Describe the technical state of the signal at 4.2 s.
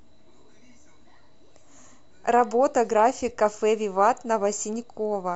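At 4.2 s the speech signal is intact, with no dropout, distortion, glitch or other technical fault audible at that point.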